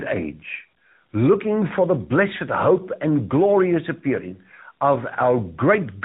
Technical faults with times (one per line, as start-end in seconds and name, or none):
0.00-6.04 tandem speech coding